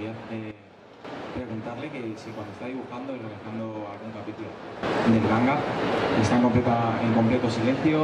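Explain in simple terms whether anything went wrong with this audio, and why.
Yes, something went wrong. The volume jumps abruptly twice, a fault called a sudden gain jump. At 0.51 s the sound drops sharply quieter, then snaps back at 1.05 s. At 4.83 s it leaps much louder and stays that way to the end. The background noise changes level along with the sound each time. The likely cause is a volume setting applied instantly, with no gradual fade in between.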